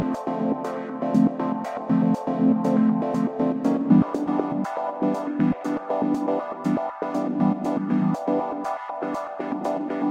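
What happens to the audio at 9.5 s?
A faint metallic shimmer over a dulled top end, present throughout the clip, is imaging from linear upsampling. Straight-line interpolation, which points to a 22 kHz to 48 kHz conversion, leaves very weak mirror images between 11 and 22 kHz.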